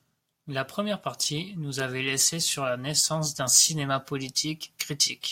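Nothing in this speech recording stood out as a technical problem on listening.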